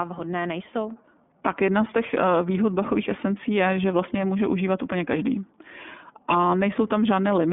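Throughout the speech, the iLBC codec confines the sound to about 200 Hz to 3.5 kHz, with nothing above 3.7 kHz; a spectrogram shows a hard, flat ceiling. Each frame is coded independently, fitting 30 ms frames at 13.33 kbps, giving a plainly rough, synthetic edge.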